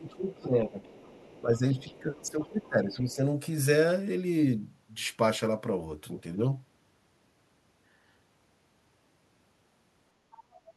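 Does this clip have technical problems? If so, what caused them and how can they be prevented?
Yes. The speech suppressed in double talk comes in two stretches, 0 to 0.77 s and 1.4 to 3.21 s. Within them the talker dips by up to roughly 15 dB and loses pieces, for around half a second and then a second and a half in total. This is likely an echo canceller turning everything down while both sides spoke at once. Unlike a network dropout, the dips coincide with the faint second voice. A canceller with proper double-talk detection, or a headset, prevents it.

The other side's voice leaking through appears at 0.05 to 0.4 s, 0.83 to 1.58 s, 1.81 to 1.94 s, 2.14 to 2.21 s, 2.41 to 2.69 s and 10.52 to 10.61 s. It sits roughly 25 to 30 dB below the talker, as faint scraps. The likely cause is loudspeaker sound reaching the microphone that the canceller failed to remove. It differs from room reverberation because it is a separate voice with its own timing, not a smeared tail of the talker's own sound. 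Using headphones, lowering the loudspeaker level or giving the canceller a correct reference signal prevents it.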